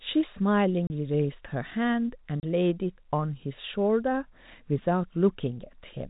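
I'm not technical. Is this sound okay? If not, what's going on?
No, not quite. The speech has two brief dropouts, at 0.87 s and at 2.4 s, each about 30 ms long. That's packet loss filled with silence: small chunks of the audio went missing on the way, and the receiving end just played nothing in their place. Each gap matches roughly one lost packet, and the sudden stop and restart can make a tiny click. The muffled, phone-line sound comes from normal G.711 telephone coding.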